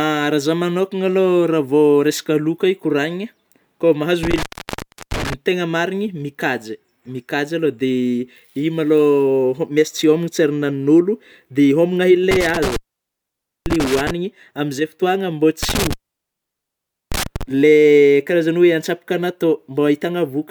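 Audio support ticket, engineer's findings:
Intermittent contact, likely a loose cable or plug in the signal path, opening three times. Each opening gives a dropout with crackle at both edges and hiss while the line is open: 4.23–5.34 s (open about 0.71 s), 12.31–14.11 s (open about 0.90 s), 15.63–17.43 s (open about 1.18 s). The open periods grow longer across the clip. Reseat or replace the connector and cable.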